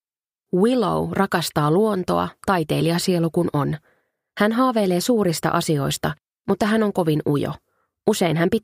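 Nothing stood out on listening; no technical fault could be heard anywhere in the clip.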